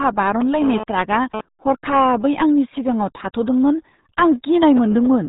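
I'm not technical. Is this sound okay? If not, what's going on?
No. The whole recording has passed through the RealAudio 14.4 codec, an old dial-up-era speech format. It strips away everything above about 3.8 kHz and badly damages what remains, so the speech sounds muffled, thick and gargly from start to finish.

From 0.41 to 1.41 s there is also GSM phone buzz. A nearby mobile phone was sending data, and its radio pulses leaked into the audio circuitry as a harsh, rasping buzz at about 217 Hz that cuts in and out, unrelated to the speech.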